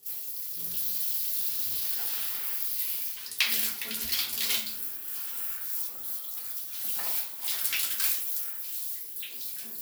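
No faults detected in these sounds.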